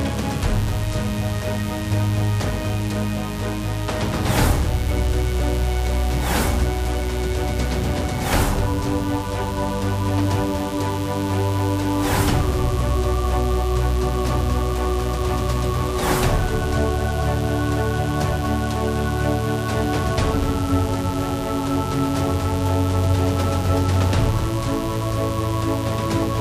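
There's mains buzz under the audio from start to finish, a steady, raspy drone tied to a 60 Hz supply and sitting only around 15 dB below the wanted sound, so it's hard to miss. The rasp comes from sharp switching spikes landing twice per mains cycle, which spread harmonics of 60 Hz up into the several-kilohertz range. Something like a dimmer, a rectifier or a missing shield let that interference into the signal path.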